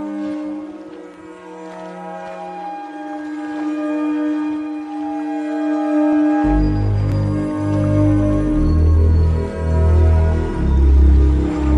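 Brief clicks or tiny skips occur at 1.14, 6.13 and 7.12 s, each dropping roughly 14 to 17 ms of audio. This is overlap between stream segments: at these 1-second segment boundaries, overlapping time stamps make the player discard real sound, so the waveform jumps.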